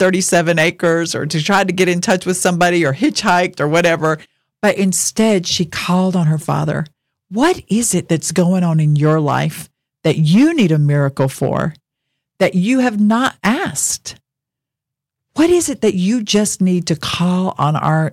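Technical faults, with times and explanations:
Throughout: hard clipping. The speech is driven about 10 dB past what the signal path can carry, so the loudest peaks are sheared off flat. Only a small share of the audio, roughly one or two percent, goes over the limit. Those flattened tops create harmonics high in the spectrum. The result is a crackle that lands on the stressed, loud moments of speech. Quieter stretches pass through clean.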